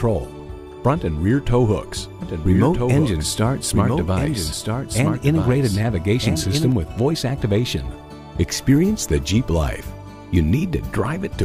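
From 2.22 to 6.72 s a doubled audio track appears: a second, full-band copy trails the original by roughly one and a half seconds, around 5 dB quieter. Unlike an echo or reverb, it carries no decay or room colour and switches on and off abruptly, likely from a slower capture path.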